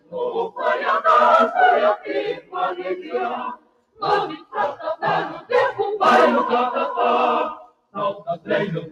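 A noise suppressor meant for speech is applied to music or sounds for the whole clip, treating sustained parts as noise and pulling them down. Level swings by roughly 10 dB, so held sound pumps and thins while onsets pass through more intact.

In places the sound is cut by the noise suppressor more deeply, sinking or having its decay clipped: 0.00 to 0.21 s (about 17 dB), 2.32 to 2.55 s (about 16 dB), 3.55 to 4.02 s (about 17 dB), 4.40 to 4.55 s (about 13 dB), 7.55 to 7.95 s (about 17 dB), and 8.14 to 8.49 s (about 14 dB).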